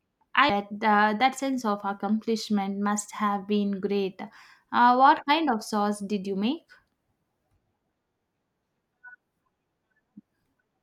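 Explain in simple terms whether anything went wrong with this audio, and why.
At 0.50 s, just before "uh that sense of", there is a tiny blip. It is damaged data in a compressed stream: the player briefly misread corrupted bytes.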